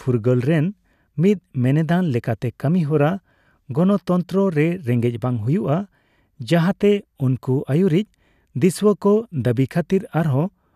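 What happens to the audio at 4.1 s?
At 4.1 s the speech carries on intact, with no dropout, click, distortion or other fault at that moment.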